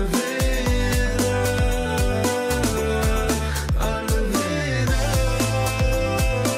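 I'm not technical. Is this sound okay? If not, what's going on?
Yes, this sound is okay, and nothing is going wrong with it.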